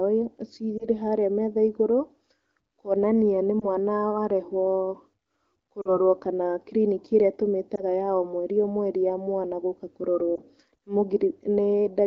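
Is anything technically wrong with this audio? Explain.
Yes. The speech has lost AMR speech frames, heard as brief dips or warbles at 0.78–0.87 s, 3.59–3.69 s, 5.82–5.97 s, 7.75–7.83 s and 10.35–10.41 s, with the one at 5.8 s longer, fading to near silence. Radio errors corrupted frames, so the decoder reused the last good pitch and vocal tract settings at falling gain. Unlike a hard dropout, the single-frame gaps stay voice-like and smeared rather than cutting to silence or clicking.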